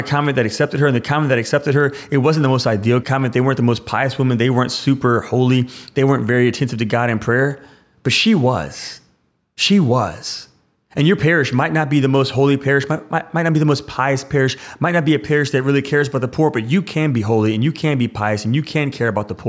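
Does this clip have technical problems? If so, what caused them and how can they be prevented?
No, there are no technical problems in this recording.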